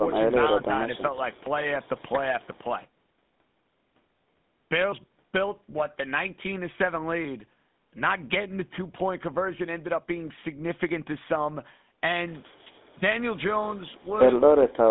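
Across the whole recording the speech has a buzzy, gravelly roughness, clearly audible throughout, and a narrow telephone band running from about 150 Hz to 3.6 kHz, with nothing at all above 3.8 kHz. This is the GSM full-rate codec. It rebuilds each sound from a vocal-tract model fed by a coarse, regularly spaced pulse excitation, which fits a 13 kbps channel and gives the speech its rasp.

Right at the start, from 0.00 to 0.04 s, the level dips by about 5 dB. It dips again by about 5 dB within 0.34 to 0.72 s, turning the speech down in short patches totalling roughly 150 ms. Near 12.97 to 13.02 s a sharper dip of about 10 dB briefly turns the speech down. The likely cause is speech suppressed in double talk: the echo canceller could not separate this talker from the far-end echo while both sides spoke, so it turned this side down too.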